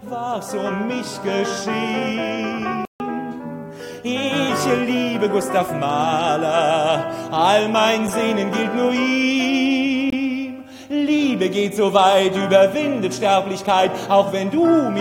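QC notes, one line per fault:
2.85–3.00 s, playback stall: The sound cuts out for about 150 ms, then resumes. The player likely ran dry or was blocked.
3.00–4.49 s, catch-up at higher speed: Playback runs 1.1 times fast to recover lost time. Pitch rises about a semitone and a half, then settles.
10.10–10.14 s, corrupt frame muted: A 40 ms hole opens abruptly. The decoder rejected damaged data, which fits two short frames, and silence filled the gap.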